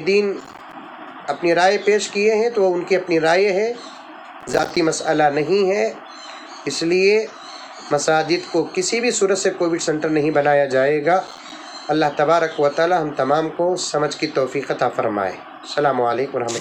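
Three bursts of processor overload crackle turn up, at 0.41 to 0.73 s, 4.41 to 4.77 s and 11.27 to 11.52 s. Each time, the processor couldn't finish its audio buffers on schedule, and a string of missed deadlines left tiny silent dropouts with hard edges. The gaps are very short, which points to buffers only a few milliseconds long. Strung together, they sound like a gritty tearing crackle riding on the audio, and it clears as soon as the load drops.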